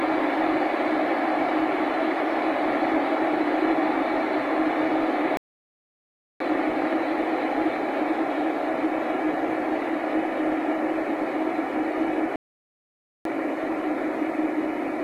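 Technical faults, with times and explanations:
5.37–6.40 s and 12.36–13.25 s, playback stall: The sound cuts out abruptly in mid-flow and goes fully silent. The first gap lasts about 1.03 s, the second about 0.89 s. Each gap is silence, and then the sound picks up again. The likely cause is a player that ran short of buffered data, or whose audio thread was blocked, so nothing reached the output until it recovered.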